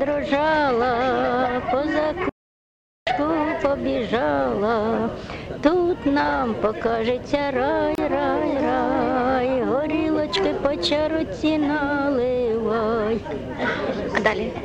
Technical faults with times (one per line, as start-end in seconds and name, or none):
2.29-3.07 audio dropout to silence
7.95-7.98 gap at a join of encoded pieces